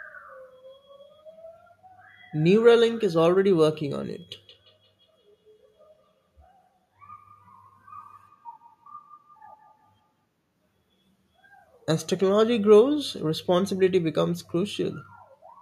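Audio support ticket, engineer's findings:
Feedback echo between two devices, 4.33 to 10.25 s. Second device in the room replaying the far mic's signal into that mic; local echo canceller blind to it. Repeats at roughly 150 ms intervals, each thinner and more ringing. Peak about 35 dB below the speech.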